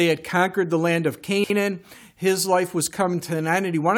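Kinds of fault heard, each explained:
Chunks out of order: Around 1.26 to 1.5 s, one 60 ms chunk turns up three chunks late, playing after the pieces it should have come before. Nothing's missing, but that quarter-second comes out jumbled, with three hard joins.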